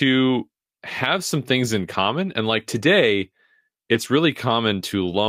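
Around 1.93 to 1.95 s, and again at 3.93 to 3.95 s, there's a lost packet rebuilt from error correction. Each time, about 20 ms of speech got patched from the low-bitrate backup copy carried in the next packet, so nothing drops out, but that moment sounds briefly rougher and grainier.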